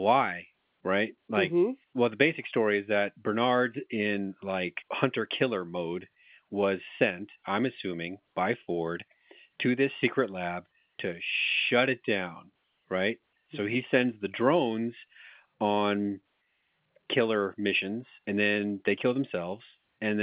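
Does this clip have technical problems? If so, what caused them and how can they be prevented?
No, this speech clip has no technical problems, so there is nothing here that needs preventing.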